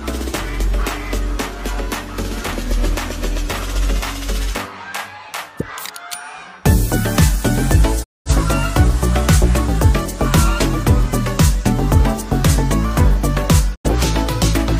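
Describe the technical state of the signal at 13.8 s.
At 13.8 s the signal is in a digital broadcast dropout, 13.74 to 13.89 s. The receiver muted on bad frames, fading over 20 ms into an 85 ms silence, fitting two lost frames. The waveform goes flat and the spectrogram shows a blank vertical gap.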